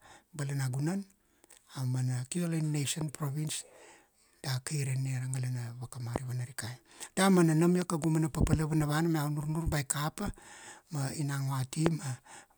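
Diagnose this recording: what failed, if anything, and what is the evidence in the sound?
The fault sits in the analogue wiring, likely a loose plug, switch contact or static discharge putting brief voltage steps onto the line. Each step comes through as a loud pop on top of the speech, which carries on underneath: at 3.01 to 3.03 s, 6.16 to 6.18 s and 11.86 to 11.89 s. There is also a double pop between 7.82 and 8.06 s, after "nam ia" and before "mana papala vanava". The pops peak roughly 10 to 20 dB above the speech.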